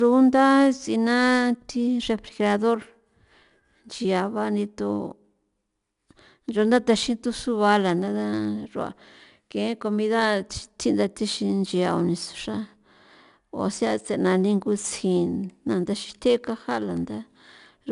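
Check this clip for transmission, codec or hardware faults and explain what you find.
A codec fault runs through the whole speech clip. Throughout, a plainly audible gritty hiss rides on every loud syllable, with nothing above 10.6 kHz. This is 4-bit ADPCM compression, which codes each sample as a coarse, adaptive step from a prediction.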